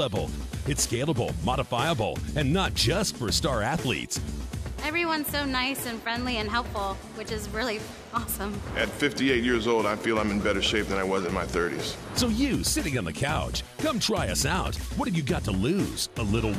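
No technical faults can be heard in this recording, and the signal stays steady and intact throughout.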